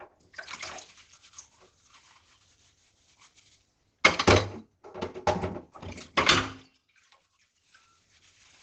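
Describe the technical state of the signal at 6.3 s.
At 6.3 s the audio has likely passed through low-rate Opus compression, which runs through the whole clip rather than starting there. The muffled, hoarse character fits the encoder falling back to its speech-oriented SILK mode at a rate around 12 kbps, with wideband bandwidth. Nothing remains above about 8.8 kHz, so the top end is dulled, and the heavy coding damage leaves the remaining sound hoarse.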